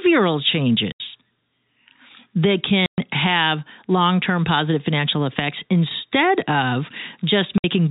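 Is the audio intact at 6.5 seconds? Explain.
Yes, at 6.5 seconds the speech is intact, carried through G.711 telephone coding with its narrow band and faint level-following hiss but no break, dropout or other fault at that moment.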